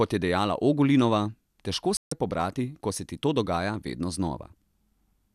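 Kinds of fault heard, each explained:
Digital broadcast dropout: the speech mutes at 1.97 s and returns at 2.12 s, a 144 ms hole where the receiver discarded missing or corrupt frames and held silence until clean ones arrived. The gap fits roughly six lost frames, and that audio is gone.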